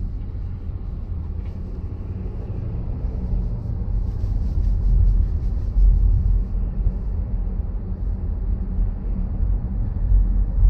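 No technical faults are audible anywhere in this audio.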